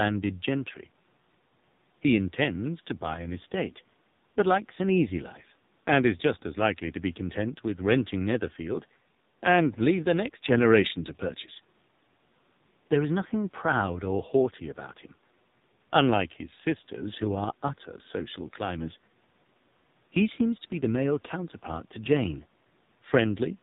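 From start to finish the speech passes through the AMR narrowband mobile codec: nothing above 4 kHz survives, and heavy damage leaves the voice buzzy and synthetic. That points to a low mode near 5.9 kbps. Unlike simple band-limiting, the vocal-tract model itself audibly roughens the voice.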